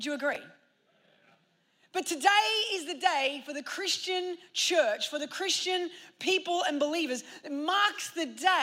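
At 0.33 to 0.36 s, chunks out of order: a 10 ms chunk plays two chunks late, giving a brief jumbled moment, unlike a dropout, since nothing goes missing.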